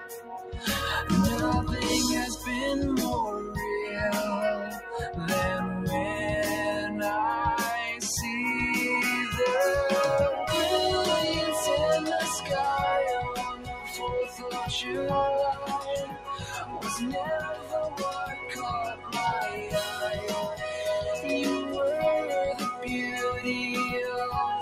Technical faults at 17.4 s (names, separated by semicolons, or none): noise suppressor applied to music or sounds; sound cut by the noise suppressor